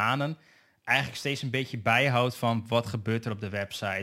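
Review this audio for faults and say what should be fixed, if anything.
Crude rate conversion runs throughout the speech: samples were dropped without filtering, which fits a 48 kHz to 44.1 kHz conversion, leaving an inharmonic fizz about 25 dB below the signal. Redo the conversion from the original audio with a properly filtered, band-limited resampler.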